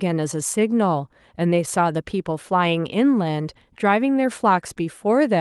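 No dropouts, clicks, distortion or other transport or processing faults are audible anywhere in the recording.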